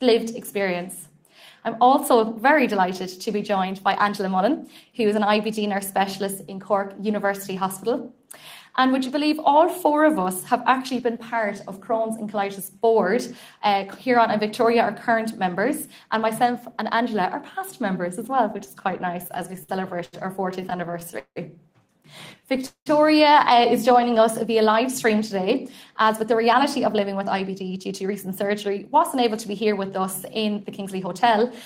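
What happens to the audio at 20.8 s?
At 20.8 s the audio is in a run of repeated stalls (stutter) from 20.61 to 21.38 s. Packets arrived late, so the jitter buffer emptied nine times. The receiver stretched the preceding sound across each gap, the longest 171 ms, making the passage drag and stutter without losing anything.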